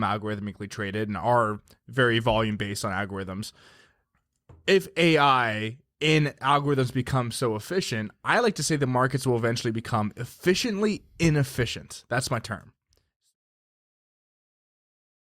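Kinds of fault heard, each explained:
No faults are audible in this speech recording.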